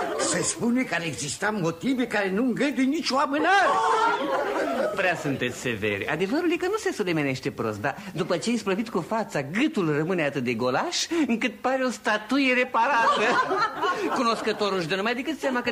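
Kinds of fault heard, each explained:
Nothing stood out as a fault on listening.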